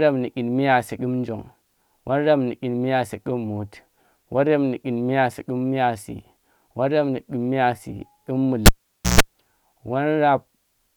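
At 8.66 s a live cable was pulled out and plugged in again while the speech was running. Breaking the connection gives a sharp pop, then the signal drops to near silence for about 0.50 s. As the plug goes back in, only its tip touches at first, so the unshielded contact picks up a 0.14 s burst of 60 Hz mains buzz. A second pop marks full contact, and the speech returns at 9.21 s.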